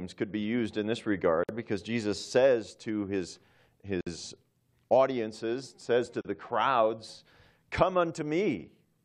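Gaps at joins of encoded pieces cut this speech at 1.44 s (53 ms), 4.01 s (57 ms) and 6.21 s (37 ms): untrimmed encoder delay and end padding leave abrupt, smeared silences before the sound resumes where it stopped.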